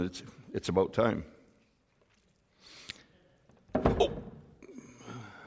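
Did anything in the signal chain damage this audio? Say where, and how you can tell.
No, nothing along the chain seems to have hurt this one, and there's no stage I'd point to where the sound got damaged on its way to you.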